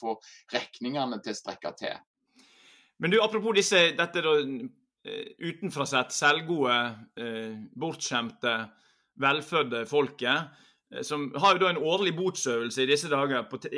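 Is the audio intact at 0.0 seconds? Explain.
Yes, at 0.0 seconds the audio is intact, with no dropout, click, distortion or other fault audible at that moment.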